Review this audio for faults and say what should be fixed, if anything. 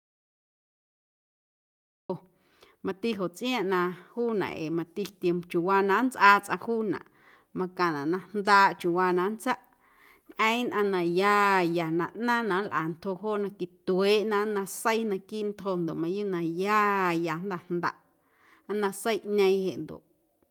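Audio dropout to silence from 0 to 2.10 s: the clip opens in the middle of the gap, with dead digital silence and no room tone at all until the speech cuts in abruptly at 2.10 s. That kind of silence points to the input being lost, likely through a disconnected device, failed link or stray mute, while the recorder kept writing empty samples, so whatever was said then is gone. Check connections and mute states before recording starts.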